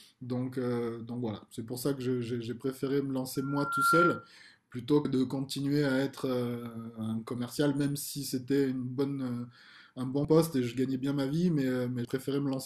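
From 3.35 to 4.31 s there's loudspeaker feedback squeal: the mic catches its own speaker, and a 1.4 kHz tone swells over about half a second to roughly 10 dB above the speech. Then compressed frames get skipped at 5.04, 10.24 and 12.05 s, jumping ahead about 70, 50 and 150 ms, which fits lost 26 ms frames.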